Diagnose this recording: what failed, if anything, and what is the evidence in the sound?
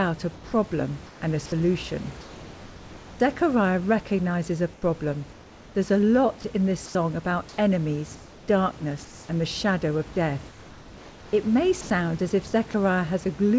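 Between 0.35 and 3.20 s the speech turns choppy, with about 1.4 s of it swapped for flat hiss. This is likely sound chopped by the voice detector in call processing.

At 4.73–5.75 s after "recognizes a", 6.86–7.58 s after "a lot in this", 9.05–9.29 s (about 2 dB quieter) and 10.49–11.90 s, the room tone becomes featureless hiss. This is likely comfort noise in place of the background, during discontinuous transmission.

Speech vanishes into steady noise for 90 ms at 11.81–11.90 s, and briefly at 12.71–12.74 s after "as if". This is likely sound dropped by the voice detector, which misjudged it as background.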